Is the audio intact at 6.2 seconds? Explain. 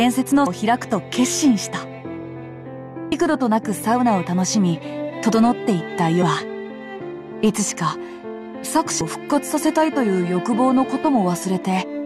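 No. At 6.22 s, compressed frames are skipped. A stretch of roughly a third of a second never plays, which fits about ten 32 ms frames going missing or being refused by the decoder. The audio jumps ahead by that amount.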